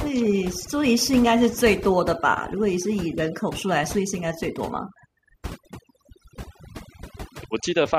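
Throughout, the background drops and breaks up into twinkling specks. This is overdone noise removal: an overly aggressive noise reducer cut away individual frequency bands close to its noise estimate, stripping quieter voice detail along with them.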